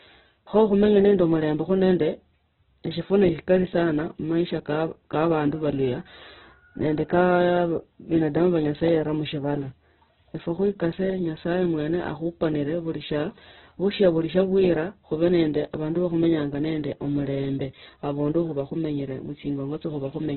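A speech recording squeezed through very low-rate Opus compression, likely in its CELT music mode at a bitrate around 8 kbps, runs the whole length: bandwidth collapses to narrowband with nothing above 4.1 kHz, leaving the speech muffled, while heavy damage turns it rough, grainy and noisy.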